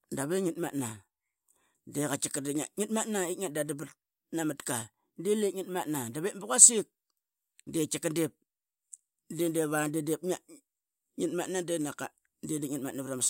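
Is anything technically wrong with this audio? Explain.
No, there are no faults.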